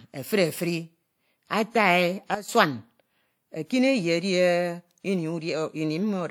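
Speech, with a sudden gain jump from 2.35 to 2.49 s: level and background noise drop together by about 12 dB, likely from a gain change applied without a ramp.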